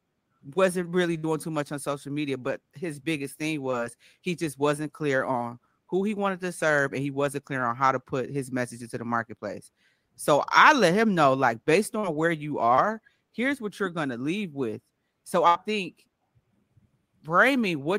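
Burst of packet loss at 1.17–1.25 s and 15.47–15.57 s breaks this speech recording twice: about 60 ms and then 80 ms of audio never arrived in time. The receiver stretched the last sound for about 58 ms and 75 ms, fading it as a held buzz or hiss, then jumped ahead, so the audio just before "too much on social" and the passage at 15.5 s are simply gone. Short concealed packet loss appears at 3.71–3.75 s between "but his biggest thing" and "he just wasn't clear", at 11.99–12.05 s, and at 12.75–12.79 s between "where you" and "here's what you're going". Each hole of 20 to 40 ms was patched by extending the preceding sound, pitched or noise-like, for about 15, 42 and 25 ms before blending back, leaving a brief smear or wobble where a short sound may drop out.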